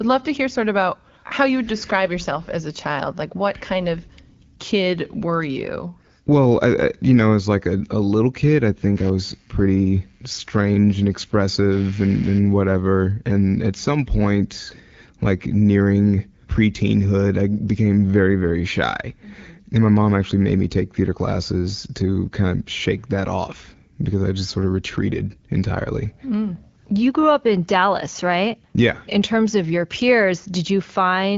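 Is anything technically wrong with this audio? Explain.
Yes. Computer activity noise runs from 8.97 to 13.01 s, just after "little kid I think." Changing processor load shifts the shared audio ground, adding a buzz pulsing near 150 Hz, roughly 30 dB below the speech.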